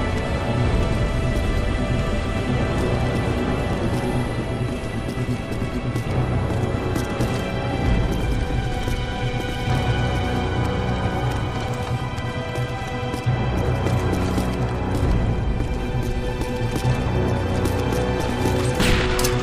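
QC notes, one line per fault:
1.74, 3.73, 5.72, 7.71, 9.70, 11.69, 13.68 and 15.68 s: overlap between stream segments. At each 2-second segment boundary the player trims 5 to 19 milliseconds it wrongly treats as duplicated, so the waveform jumps and a tiny skip is heard.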